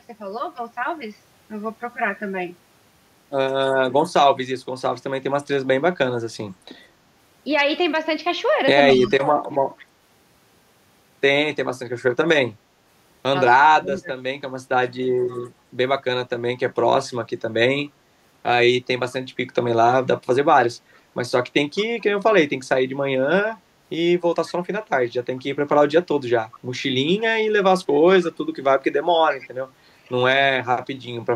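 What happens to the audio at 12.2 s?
Nothing goes wrong at 12.2 s; the speech there plays through intact, with no dropout, click or other fault.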